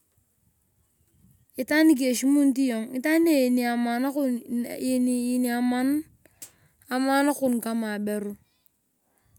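Speech recording, no technical faults detected.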